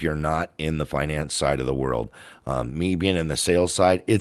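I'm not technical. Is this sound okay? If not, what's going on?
Yes, nothing stood out as a problem on listening to this speech recording.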